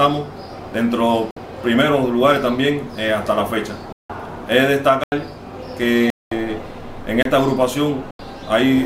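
Blocks of digital silence cut into the audio six times: at 1.31 s (57 ms), 3.93 s (171 ms), 5.04 s (85 ms), 6.10 s (214 ms), 7.23 s (27 ms) and 8.11 s (85 ms). Each drops abruptly to silence and returns without a fade. Three of the gaps are whole blocks of 4096 and 8192 samples, which points to output buffers the program likely failed to fill in time.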